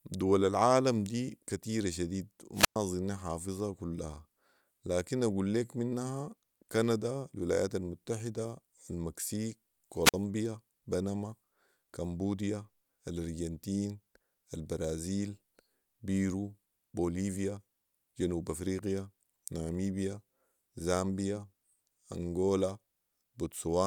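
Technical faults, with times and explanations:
2.54–2.78 s and 10.04–10.14 s, wireless microphone squelch dropout: the radio link of an analogue FM wireless microphone weakened until the receiver's squelch shut its audio output. As the carrier fades, the demodulator's noise climbs audibly just before the cut. The receiver then mutes, leaving a gap of about 110 ms in the first event and about 50 ms in the second, before the signal recovers and the sound resumes.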